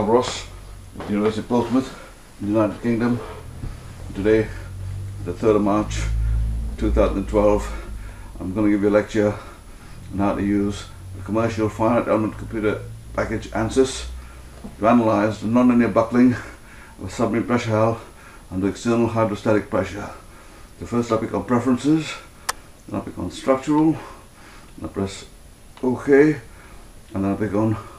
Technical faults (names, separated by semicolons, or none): none